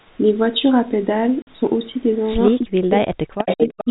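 A speech clip with three kinds of fault. At 1.42 to 1.47 s a 50 ms hole of packet loss filled with silence cuts the sound, with hard edges, which fits five 10 ms packets. Echo leak appears twice. From 2.14 to 2.26 s a very faint copy returns about 341 ms late. From 3.38 s to the end a second copy, delayed about 350 ms, is nearly as loud as the talker. A loudspeaker's echo canceller likely let both through. From 2.59 s to the end, speech is suppressed in double talk. The talker's level dips in pieces for about a second in total, at worst falling very deeply, likely because the canceller muted both voices together.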